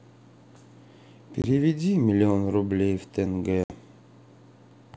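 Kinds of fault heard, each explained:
Packet loss on an ADPCM call: the speech drops to a hard-edged silence, about one packet's worth (20 ms) at 1.42 s and about three packets' worth (60 ms) at 3.64 s. The decoder's adaptive predictor and step size then no longer match the sender's, so the speech comes back slightly distorted, settling within tens of milliseconds. A plain dropout would resume cleanly, without that brief mistracking.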